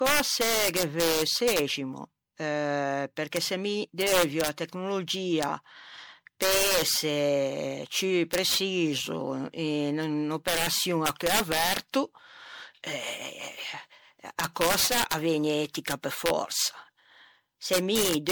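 Integer overflow runs through the whole speech clip. The gain pushes peaks about 3 dB past full scale, and instead of being limited, those samples wrap around to the opposite extreme of the integer range. Only a small fraction of samples exceed the limit, well under one percent, so the fault appears only on the loudest syllables. It sounds like sharp, violent cracks, much harsher than ordinary clipping, because each affected peak jumps across the entire range in a single sample.

Generation loss is also present from start to end. The sound is swirly and hollow, with a smeared, watery texture and softened consonant attacks. Content extends to about 19.9 kHz, yet the degradation is heavier than that bandwidth would suggest. The likely cause is repeated lossy re-encoding, consistent with an MP3 chain around 96 kbit/s applied perhaps seven times over. Each pass requantises on a shifted frame grid, so noise and spectral holes accumulate.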